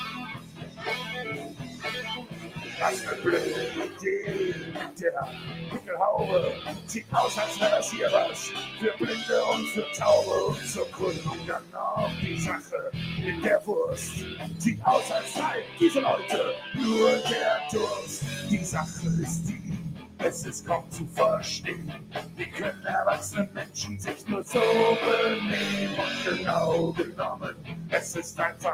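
From the very start a noise suppressor applied to music or sounds is riding the whole clip. It's a processor built for speech, so it reads steady tones, ambience and decay tails as noise and pulls them down, while sharp onsets slip through. The gain keeps shifting by something like 15 dB, which gives the audio a pumping, fluttery feel, with held material thinning out between attacks.

You can hear the sound cut by the noise suppressor most clearly in six stretches. The first runs from 0.09 to 2.76 s, with about 11 dB of drop over roughly two seconds of that span. Next comes 3.9 to 7.12 s, down about 10 dB for around a second and a half. From 10.56 to 12.73 s it dips about 11 dB, but only for about 0.7 s of that window. At 15.65 to 15.8 s there's a brief notch of about 6 dB. From 18.91 to 24.29 s it sinks about 11 dB across roughly two seconds. The last stretch runs from 27.0 s to the end at 28.73 s, down about 10 dB. 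In each case the sustained parts and tails sag or get clipped short, while the attacks stay mostly intact.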